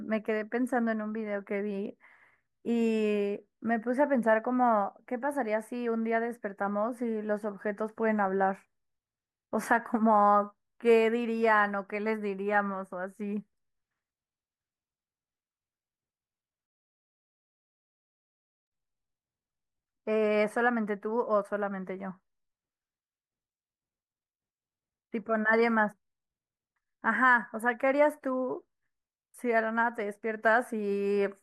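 No technical faults can be heard anywhere here.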